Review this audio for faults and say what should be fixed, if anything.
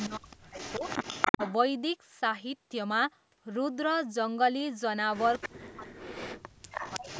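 Echo leak appears from 0.00 to 1.53 s, briefly at 5.41 to 5.49 s, and again from 6.77 to 7.20 s. A copy of the speech returns 320 ms late. It sits about 5 dB below the direct speech at first and about 10 dB below later. This is likely a far-end loudspeaker whose echo canceller let its microphone pickup through. On a spectrogram, the harmonic patterns repeat shifted 0.32 s to the right. In the waveform, fainter duplicate envelopes trail each burst. Better acoustic coupling control and a well-converged echo canceller at the loudspeaker end would prevent this.

Speech suppressed in double talk occurs at 0.08 to 0.84 s, with roughly 0.4 s affected and dips of around 40 dB. It also occurs at 1.31 to 1.41 s, a short dip of around 15 dB, and at 5.47 to 7.09 s, with about a second affected and drops of around 40 dB. Speech ducks or vanishes in pieces while the far side's sound plays on the loudspeaker, likely because the echo canceller could not tell the talker from the returning echo and attenuated both. 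The waveform shows sudden notches in the envelope. The spectrogram shows the speech bands fading to near-blank patches. A canceller with better double-talk detection, applying gentler suppression, would keep the talker audible.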